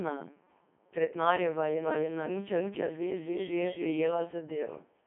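Throughout, a Codec 2 vocoder rebuilds the speech from pitch and envelope, consistent with 3.2 kbit/s. The result is robotic and buzzy, confined to 150 Hz–3.4 kHz, with nothing above 3.7 kHz.

From 1.84 to 3.86 s, a doubled audio track appears, likely from a second, slower capture path mixed in. An equally loud, dry copy trails roughly a third of a second behind and starts and stops abruptly.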